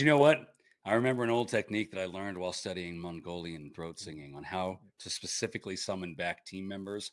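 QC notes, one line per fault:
Throughout: resampler restarted on every block. The speech carries a steady 100 Hz buzz that rides on the signal and drops away in the gaps. The conversion was run on 10 ms blocks in isolation, which fits a 48 kHz to 24 kHz change. At each block boundary the filter lacked the real neighbouring samples, leaving a small discontinuity every 10 ms. At that spacing the ticks fuse into a buzz.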